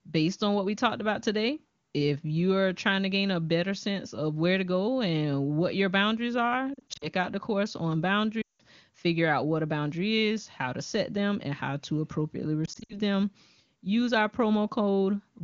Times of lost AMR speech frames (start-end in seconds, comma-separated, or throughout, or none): 6.73-7.07, 8.41-8.62, 12.66-12.99